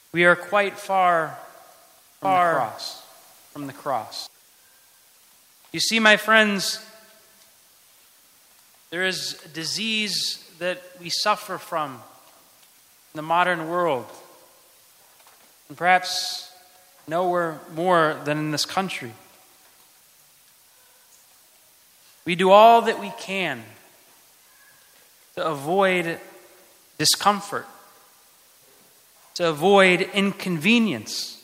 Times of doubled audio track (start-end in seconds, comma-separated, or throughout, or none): 2.25-4.27